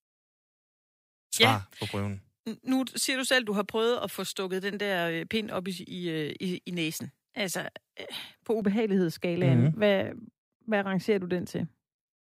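From 0.0 to 8.62 s the speech sounds thin, bright and hissy; pre-emphasis was left on without de-emphasis, leaving 10 kHz about 11 dB hot, consistent with a J.17 curve.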